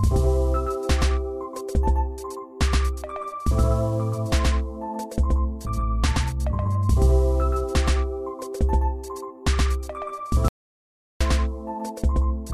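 From start to end the audio carries a doubled audio track: a second full-band copy trails the first by about 150 ms at roughly equal level, with no decay or room colour. That likely comes from the signal being captured twice through paths of different latency.

At 10.48 s an audio dropout to silence begins, lasting until 11.21 s. The sound cuts off abruptly into silence with no room tone, and about 0.72 s of material is lost, likely because the input link failed while recording continued.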